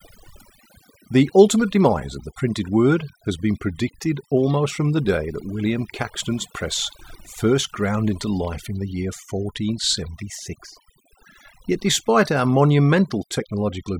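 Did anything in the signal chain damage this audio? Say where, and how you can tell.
Yes: overdone noise removal in the processing stage, throughout the speech, strips bands near the noise estimate, leaving near-silent gaps with twinkling specks.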